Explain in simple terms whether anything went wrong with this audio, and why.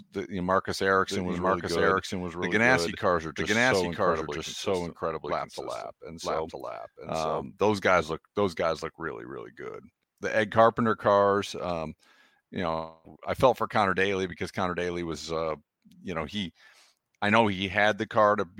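From 0.96 to 7.46 s there is a doubled audio track: the speech plays twice, a second copy roughly one second behind at about the same loudness, until it cuts off abruptly just before "those guys look those". This is likely a second, slower recording path mixed in. Unlike a room echo, the copy never fades and has no room sound.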